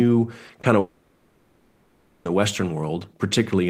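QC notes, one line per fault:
0.47–0.51 s and 0.61–0.65 s, short concealed packet loss: brief smears in the speech, each about 20 ms of missing audio filled by extending the preceding sound.
0.79–2.27 s, long network dropout: the last sound stretches into a fading buzz or hiss for about 1.5 s, likely concealment covering audio that never arrived.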